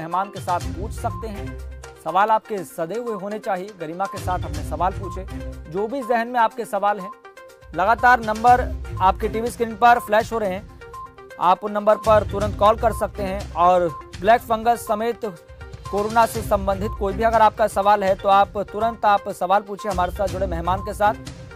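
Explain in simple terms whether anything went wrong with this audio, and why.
Nothing went wrong here: no dropouts, glitches, distortion or level jumps turn up anywhere in the audio.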